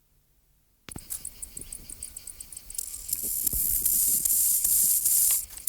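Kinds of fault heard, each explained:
Hard clipping: a stage in the chain was driven about 5 dB past what it could pass, so peaks were sliced flat, under one percent of samples. The flattened tops add high harmonics, heard as brief crackle riding on the loudest moments.
Overlap between stream segments: two segments' time stamps overlapped, and the player trimmed away material that was never actually duplicated. A few milliseconds vanish near 4.31 s, making the waveform jump, heard as a tiny skip, consistent with 2-second segment boundaries.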